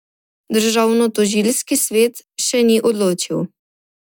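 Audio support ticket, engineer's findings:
Listened through the speech clip: nothing stood out, no findings to log.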